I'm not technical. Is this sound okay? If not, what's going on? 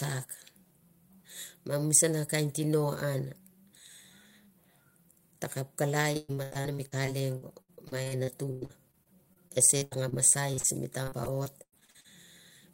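No. From 6.17 to 10.14 seconds, and again from 11.03 to 12.06 seconds, the speech turns choppy and robotic, with bits missing. This is repeated packet loss: pieces of the call kept failing to arrive (24 gaps, then 9), and each gap was patched by stretching the sound just before it.

Between these, at 10.54 and again at 10.60 seconds, there are two brief smears or wobbles. Each is a short concealed packet loss, where about four hundredths of a second went missing and the receiver quietly filled in the hole.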